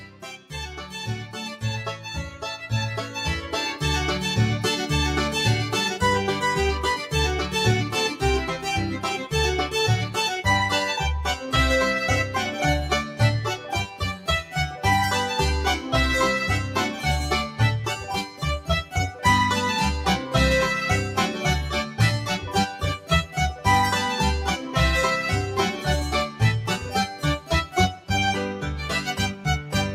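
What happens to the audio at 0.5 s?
At 0.5 s the sound is being cut by the noise suppressor. This runs from 0.0 to 1.35 s. The suppressor treats the steady parts as noise and pulls them down, by about 10 dB at the deepest. Roughly 0.7 s in all is affected. Held sound and decays sink, while sudden attacks come through.

Underneath, the noise suppressor is applied to music or sounds for the whole clip. The gain rides up and down by a modest amount, around 5 dB. The result is a pumping, thinned texture even outside the deeper cut.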